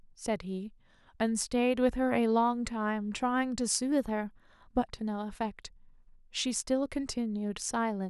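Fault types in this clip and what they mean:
Drift correction step: From 3.92 to 4.76 s, speech runs 5.65% fast and 95 cents high, then snaps back. Likely a clock-sync rate jump.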